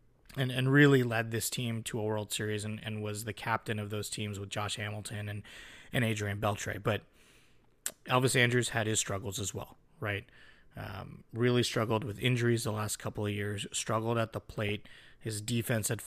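At 14.65 to 14.69 s, just after "years struggled at the", weak reception lets bit errors, a fraction of a percent, slip past error correction into the MP2 data. Corrupted samples put short blips of noise in individual sub-bands, producing brief DAB burbling over the speech.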